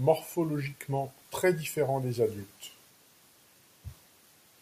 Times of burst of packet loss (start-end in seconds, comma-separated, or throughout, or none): none